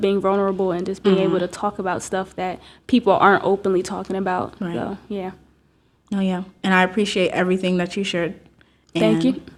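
No technical faults can be heard anywhere in this speech recording.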